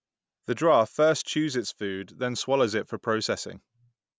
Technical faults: none

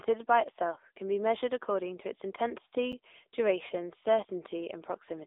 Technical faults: AMR narrowband mobile codec; block of digital silence

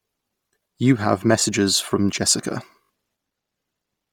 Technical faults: Bluetooth LC3 compression; repeated buffer

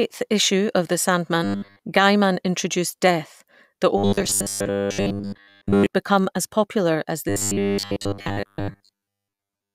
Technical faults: robotic sound from repeated short buffers

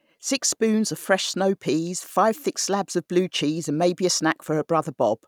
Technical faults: none

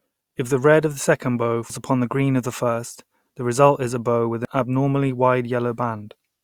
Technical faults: audio missing between chunks

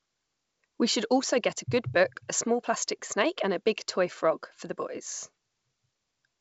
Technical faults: none

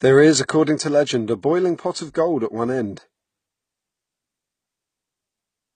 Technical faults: transcoding between lossy codecs

